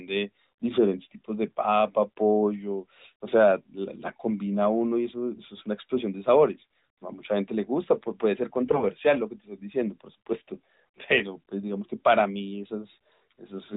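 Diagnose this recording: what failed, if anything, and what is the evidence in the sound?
From 8.65 to 8.84 s the speech turns hoarse and gargly but keeps pitch and level: AMR bit errors on the network link, misplacing the codec's excitation pulses.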